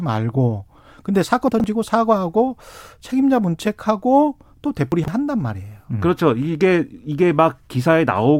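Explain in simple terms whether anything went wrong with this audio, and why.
Chunks out of order shows up twice in the speech: 1.48–1.64 s and 4.92–5.08 s. Each time a 40 ms slice of sound arrived three chunks late and played after the bits meant to follow it, so you hear a brief jumbled stutter.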